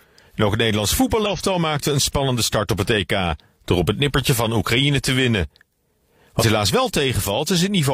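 Damaged data in a compressed stream breaks this speech clip at 1.26–1.31 s, just before "maakte een spannende start", and again at 6.37–6.44 s. Corrupted bytes make the decoder misread frames and hunt for the next valid header, leaving brief glitches.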